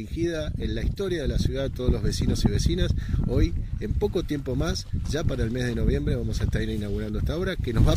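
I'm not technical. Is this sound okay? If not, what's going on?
Yes, the sound is in good technical shape, with nothing going wrong in how it was recorded or delivered.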